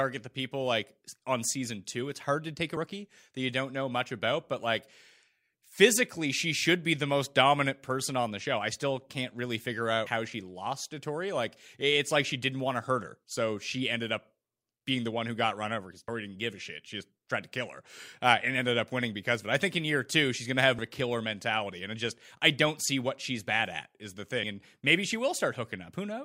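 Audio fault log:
10.06, 16.08, 20.78 and 24.43 s, compressed frames skipped: the speech jumps forward at each point, by around 150 ms after "still can't really figure", about 30 ms after "got run over because", around 150 ms after "she's going to have", and roughly 70 ms at 24.43 s. These missing stretches are whole multiples of one block length, which fits 32 ms frames that were dropped or rejected by the decoder.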